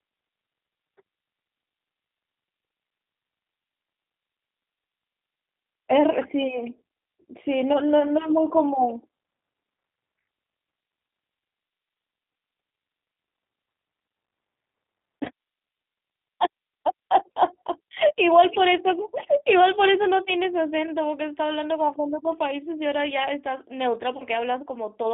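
Throughout, the speech passes through the G.729 codec at 8 kbit/s. The line band runs from 300 Hz to 3.7 kHz, so everything above 3.7 kHz is missing. The codec rebuilds speech from a filter and pitch model with few pulses, which plainly adds roughness and a synthetic edge.

VoIP packet loss concealed by the speech codec occurs from 15.25 to 15.28 s, with about 10 ms of audio lost, and from 24.17 to 24.24 s, with about 30 ms lost. The decoder fills each gap by extrapolating its last pitch and filter at falling gain. This gives a brief stretched sound that fades, and the speech stays weak for a short time after it resumes.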